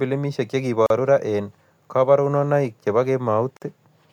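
At 0.86 to 0.90 s and again at 3.57 to 3.62 s, just after "eng' kaborunoik che po", the speech stops for about 39 and 52 ms. These are gaps at joins of encoded pieces, where encoder start-up delay and end padding were left in. Unlike a dropout, nothing is lost: the speech resumes exactly where it broke off.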